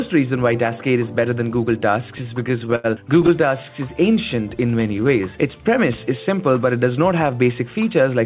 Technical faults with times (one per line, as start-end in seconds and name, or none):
2.18-2.86 repeated stalls (stutter)
4.36-5.34 jitter buffer slow-down
7.33-8.09 jitter buffer speed-up